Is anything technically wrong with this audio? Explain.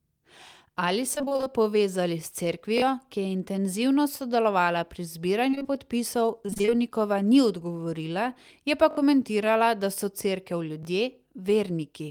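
Yes. The speech has three kinds of transport fault.

Repeated packet loss (robotic sound) occurs at 1.15–1.48 s, 5.51–5.66 s (just after "sodelovala pri") and 6.46–6.71 s. Audio kept going missing in short holes, and each hole was patched by stretching the preceding sound. The first stretch has nine gaps, with nearly half of it concealed. The second has four gaps and the third has six, none longer than about 20 ms. The result is choppy speech with fragments missing.

A jitter buffer slow-down follows immediately, at 1.50–1.72 s. The receiver rebuilt its reserve by repeating single pitch periods, adding 36 ms. For that stretch the speech runs at 86% speed with its pitch unchanged, so sounds are audibly drawn out and slightly sluggish.

A repeated buffer occurs at 2.78–2.82 s (just before "ki je"), 8.91–8.97 s and 10.83–10.85 s. When fresh audio arrived late, the device replayed its last block, with repeats that point to a 20 ms buffer. 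That block plays two extra times at the first point, three at the second and once at the third, each join hard-edged. Each is heard as a quick stutter, and the overwritten audio is lost: about 40 ms, 70 ms and 20 ms respectively.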